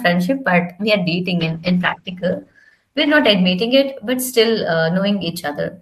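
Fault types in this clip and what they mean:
call bitrate drop: From 1.4 s the speech turns rough and muffled, and it stays that way until about 3.37 s. The call's bandwidth estimate fell, so the encoder had far fewer bits and coded the speech more coarsely. The sound points to a fall from around 40 kbps to about 13 kbps, held at the lowest rate for about 1.9 s. At that rate the high frequencies are cut off, which gives the dull, watery quality.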